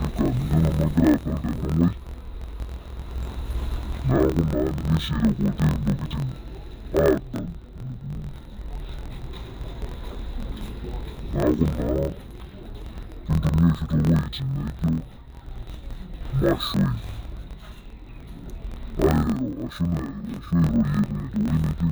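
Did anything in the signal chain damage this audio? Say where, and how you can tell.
Yes, at the sample-format conversion stage, throughout. The speech sits an octave low, doubled and choppy, chopping every 23.2 ms (43.1 Hz), which fits a 1024-sample block. That's interleaved audio read as planar: each block's halves play together at half speed.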